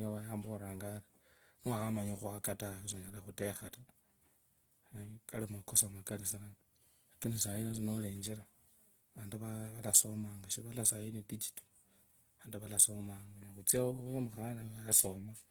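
From start to finish, the speech carries plainly audible graininess: its tones sound rough and noisy rather than swirling, with no narrowing of bandwidth. This is likely Opus compression in its music (CELT) mode, where too few bits make the encoder fill bands by copying lower ones or substituting noise; the damage points to a rate near 16 kbps. A spectrogram shows few holes but smeared, noise-like texture up to about 20.3 kHz; the waveform looks ordinary.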